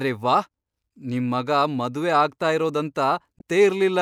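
At 3.37 to 3.41 s, near the end of the speech, there is damaged data in a compressed stream. For about 40 ms the decoder is fed corrupted bytes, misreads those frames and has to resynchronise on a later frame header. The result is a short glitch that breaks the speech. The waveform shows an abrupt discontinuity at both edges.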